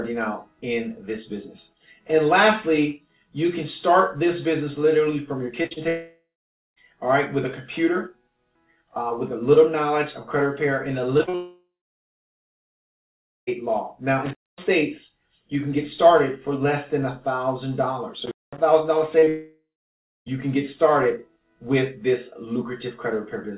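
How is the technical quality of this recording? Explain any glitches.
Pretty rough, honestly. It's coming through a narrowband call path with nothing above 4 kHz, which fits a G.711-style codec, and it's hit by several network and connection glitches.

Repeated packet loss (robotic sound) shows up at 5.62–5.78 s and again at 11.18–11.35 s. Each has three quick holes, the longest about 46 ms and 40 ms. The receiver patches them by stretching the last sound, so roughly half to two-thirds of each span turns choppy.

Long network dropouts follow at 5.88–6.78 s, 11.35–13.49 s and 19.28–20.28 s. Each starts with a fading buzzy continuation, then goes dead for about 0.5 s, 1.8 s and 0.6 s. That's likely the stream stalling and the missing audio never being played.

An intermittent contact crackles in at 14.26–14.67 s and 18.26–18.58 s. It sounds like a loose plug or cable opening for about 0.2 s each time, with clicks at both edges and faint hiss while the line is open.

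Scattered short gaps run through 19.19–20.30 s, overlapping that last dropout. There are about three tiny holes of up to roughly 30 ms, each filled by continuing the previous sound, and they come across as brief ticks and smeared hiccups.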